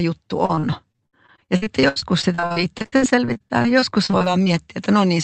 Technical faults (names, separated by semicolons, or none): repeated packet loss (robotic sound)